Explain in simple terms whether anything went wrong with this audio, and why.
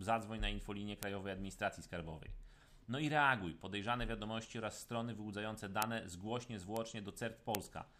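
There are four bit error spikes, each a single sharp tick at 1.03, 5.82, 6.77 and 7.55 seconds. In each, one stored digital value got a bit flipped, so a lone sample jumped way off and snapped straight back.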